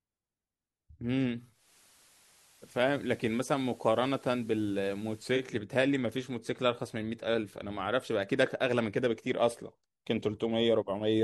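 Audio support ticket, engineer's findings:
Hybrid receiver lost digital signal, digital radio blending to analogue FM at 1.48 s, back at 5.56 s; 0.28 s cross-fades, speech drops about 1 dB, hiss roughly 30 dB down.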